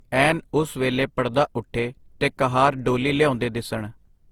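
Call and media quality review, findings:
Generation loss, whole clip: speech swirly, hollow, consonant attacks smeared. Likely repeated Opus re-encoding, roughly five passes, fitting a 48 kbit/s chain. Each pass requantises on a shifted frame grid, compounding noise. Waveform: softened onsets.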